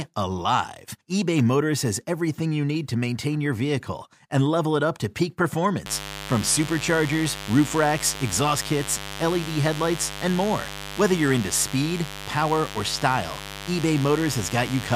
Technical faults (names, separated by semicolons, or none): mains buzz